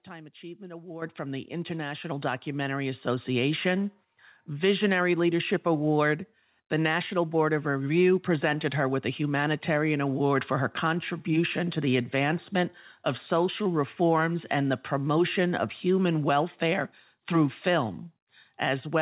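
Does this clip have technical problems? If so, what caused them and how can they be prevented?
Yes. Microphone volume stepped up at 1.02 s, by about 9 dB just before "from the", then again at 2.04 s, by about 4 dB. Call software raised the input gain abruptly, so voice and background jump together, unlike a talker simply speaking louder. The narrow sound with nothing above 4 kHz comes from the call path's G.711 codec. To prevent the jumps, disable automatic microphone gain adjustment and set the input level manually before the call.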